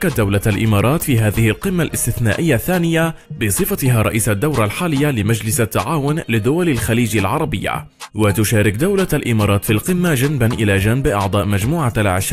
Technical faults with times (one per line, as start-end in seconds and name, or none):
none